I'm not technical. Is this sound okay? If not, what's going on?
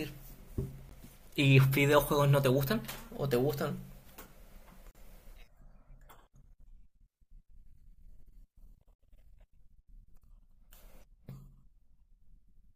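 No. The speech cuts out three times, in short, clean-edged bursts of silence: a brief one at 0.89 s, then from 4.91 to 4.95 s and from 8.95 to 8.99 s, each a few hundredths of a second. This is a gap between stream segments. The audio arrives in four-second chunks, and the timing labels on neighbouring chunks leave a tiny hole, which the player fills with silence. Nothing is actually missing; playback just pauses briefly.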